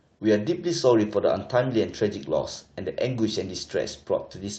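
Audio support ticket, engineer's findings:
No faults found in the speech; the call path's codec and jitter buffer are working as expected, with the top end limited to around 8 kHz, which fits Opus at a wideband call setting.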